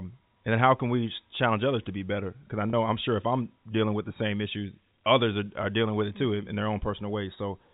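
Speech over a G.711 telephone path, band-limited below 4 kHz, with one packet loss with pitch repetition from 2.70 to 2.73 s, just before "I'm sure if I'm". The receiver bridged the 30 ms gap by repeating the last pitch period, which gives a brief held, buzzy smear, consistent with a single lost packet.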